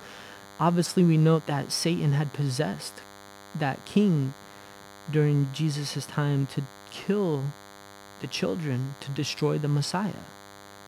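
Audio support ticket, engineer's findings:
DECT cordless phone buzz, whole clip. Nearby DECT handset or base bursting every 10 ms, rectified in the audio input stage. Result: steady thin 100 Hz buzz with dense harmonics, roughly 20 dB below the speech, under all of it.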